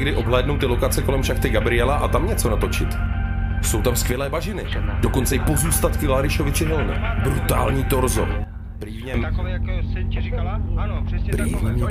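At 4.12 s the level drops abruptly by about 6 dB, holding until 4.72 s, and at 8.44 s it falls by about 11 dB until 9.14 s, with each step happening instantly rather than over a ramp. This is a sudden gain jump, likely a digital gain setting applied between one sample and the next. Unlike compressor pumping or a fade, the background noise drops by the same amount at the same instant.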